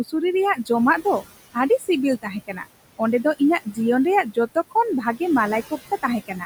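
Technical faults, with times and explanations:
Throughout: noise suppressor artifacts. The suppressor pulls the room noise down by about 18 dB frame by frame wherever it judges a band to be steady noise. The background drops away in the gaps and swells back under the speech. On a spectrogram the noise floor looks patchy and blotchy, dark in pauses and lighter under voiced stretches, with speckled isolated bins.
1.54–1.89, 2.22–2.67, 2.98–3.78, 4.24–5.21 and 5.71 s to the end: speech cut by the noise suppressor. In each span the suppressor mistakes part of the speech for noise and turns it down with the background, by about 14 to 17 dB at the deepest. A short portion of each span, roughly a tenth to a fifth of a second, is affected. Those parts come out swallowed or faint. The waveform shows those parts sharply shrunken, and the spectrogram shows their energy faded.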